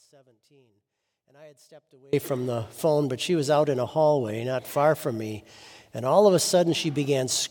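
From the very start until 2.13 s the audio sits in an audio dropout to a faint residue: the wanted signal is missing, and only a faint leak of it remains, roughly 30 dB below its normal level. At 2.13 s the full signal snaps back in mid-flow rather than swelling up. That abrupt return, with a live path throughout, separates it from a fade-in or a deliberate pause and points to a likely break in the signal feed upstream.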